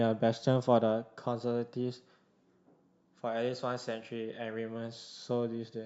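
No technical faults can be heard anywhere here.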